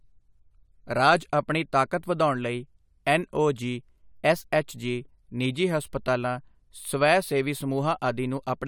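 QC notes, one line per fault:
No faults found in this speech recording. Nothing needs to be logged against it.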